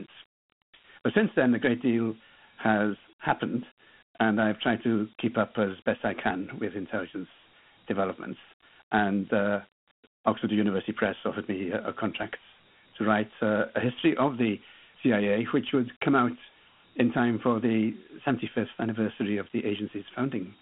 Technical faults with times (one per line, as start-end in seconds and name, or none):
0.00-20.62 Dialogic VOX ADPCM